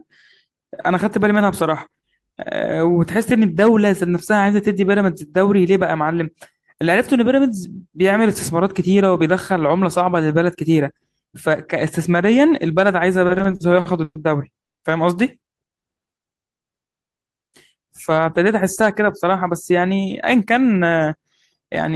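Packets in this speech recording reached the receiver late or too slowly between 13.27 and 14.17 s, so its jitter buffer ran dry eight times. These repeated stalls (stutter) were bridged by extending the last sound, the longest bridge lasting 120 ms and 280 ms in all, nearly a third of that stretch. Nothing is lost, but the speech drags and stutters. From 14.63 to 14.80 s the audio stops for 150 ms of silence and then carries on exactly where it stopped, with nothing missing. This call audio freeze was likely caused by packets being held up in transit long enough to empty the buffer, which pushed the playback delay up by 150 ms. Between 15.99 and 16.19 s the buffer was low, so the receiver stretched the audio by repeating single pitch periods, adding 36 ms. This jitter buffer slow-down plays the speech at 86% speed with no change in pitch, leaving it drawn out. From 18.12 to 20.07 s the buffer held more audio than its target, so the receiver removed short pitch-period slices, roughly 150 ms in total. 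This jitter buffer speed-up makes the speech run at 107% speed at the same pitch and sound hurried.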